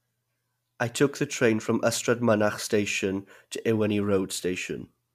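At 1.33 s a block of digital silence lasting about 1.3 ms cuts into the speech, which fits a 64-sample output buffer that was not filled in time. The signal cuts out and returns with no fade, and a gap this short is heard as a tick or dip rather than as silence.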